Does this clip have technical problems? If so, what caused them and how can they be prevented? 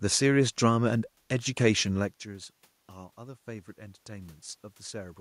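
No technical problems here.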